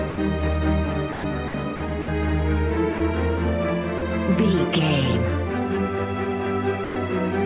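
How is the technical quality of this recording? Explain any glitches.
The recording has two faults: a constant comb-filter colouring across the whole clip, and eight brief gaps where the sound is replaced by steady noise.

Channel delay (comb filtering) runs throughout. One channel arrives a few samples late, a fraction of a millisecond, and the two are summed to mono. The shared content cancels at evenly spaced frequencies, with the first notch near 7 kHz. The result is a fixed hollow, slightly dull tone. The call path's 4 kHz band limit, typical of 64 kbps G.711, trims the top, but that is a clean cutoff. The comb is a static notch pattern that doesn't change with level or timing.

Sound dropped by the voice detector occurs at 0.10, 1.12, 1.48, 1.76, 2.02, 2.98, 3.98 and 6.84 s. Each gap lasts between 20 and 120 ms, and the longest are at 1.12 and 6.84 s. The sound gives way to steady, even hiss and then comes back. 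The likely cause is the sender's detector mistaking quiet passages for background and stopping transmission while the receiver filled in comfort noise. Packet loss differs: it leaves clicks, repeats or smeared fragments, whereas these gaps are steady noise.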